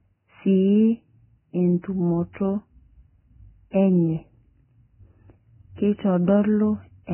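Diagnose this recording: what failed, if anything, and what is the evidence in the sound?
Codec stage, throughout. Nothing above 3 kHz, with grainy hiss on the speech. Likely heavy Vorbis compression, fitting roughly 10 kbps, quantising treble detail into noise.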